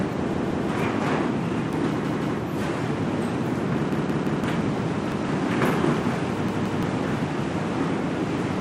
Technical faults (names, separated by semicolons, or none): repeated buffer